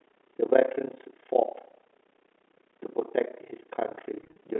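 Throughout the speech, overlap-add ripple from misjoined frames swings the level by about 60 dB roughly thirty times a second: a steady rough tremolo, not random dropouts. From 4.24 to 4.36 s, packet loss with pitch repetition bridges 70 ms of scattered gaps, none over 30 ms, with buzzy held pitch instead of silence.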